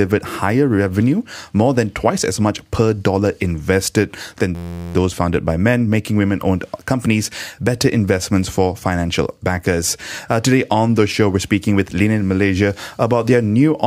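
From 4.55 to 4.95 s, a system hang loop: a frozen driver replays one 11.61 ms buffer, fitting 512 samples, as an 86.1 Hz buzz with identical waveform cycles and evenly spaced spectrogram harmonics.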